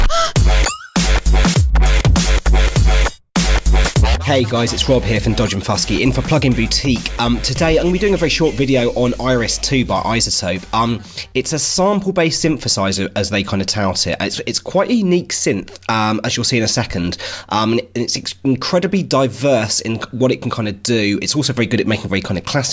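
Nothing stood out as a technical fault on listening to this recording.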